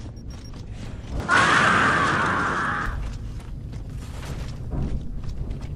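From 1.2 to 2.86 s the sound abruptly loses everything above about 10.5 kHz and gains a faint new noise floor, with no gap and no level jump, before clearing again. The likely cause is an input switched to a poorer device; the changed background hiss separates it from a simple filter.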